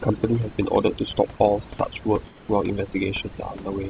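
From the first moment to the end, the room background, about 23 dB below the speech, is mostly reduced to near silence dotted with twinkling specks. This is overdone noise removal: the suppressor was set so aggressively that any frequency band close to its noise estimate gets pushed far down or shut off, so quiet parts of the speech disappear with the hiss and isolated bands flicker on and off.

Between 2.27 and 2.48 s, a stretch of about 210 ms, the remaining background changes into a smooth, even hiss with no texture, roughly 4 dB quieter than what surrounds it, and the original background returns when the sound resumes. This is most likely comfort noise in place of the background: the sending end detected no speech and stopped transmitting, and the receiver filled the gap with generated noise shaped only approximately like the real room. Throughout, there is no content above 4 kHz, which fits a narrowband G.711 A-law call codec.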